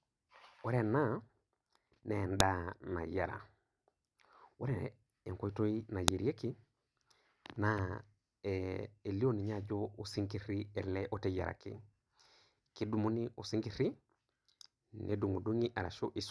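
A speech recording with a file header played as audio at 2.40 s and 6.08 s: each is a sharp, loud snap lasting about 2 ms where a new segment begins and its header bytes play as samples. Unlike a dropout, nothing goes missing, and unlike clipping, the snap doesn't depend on the speech level.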